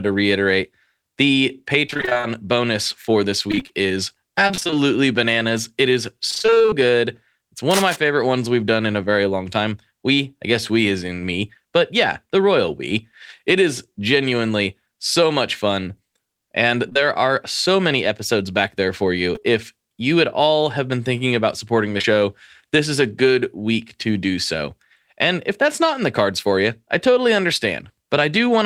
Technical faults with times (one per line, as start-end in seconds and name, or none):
1.87-6.74 repeated packet loss (robotic sound)
7.70-7.97 cable scratch noise
16.89-16.97 short concealed packet loss
19.35-19.53 repeated packet loss (robotic sound)
21.99-22.20 short concealed packet loss